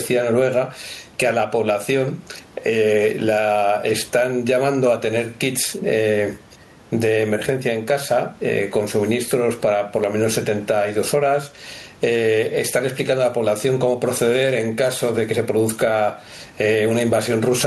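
Speech, with gain pumping throughout, with a gain swing of roughly 10 dB; the background room noise sits about 37 dB below the speech. The likely cause is excessive microphone gain driving a fast limiter or compressor, which squashes the level range.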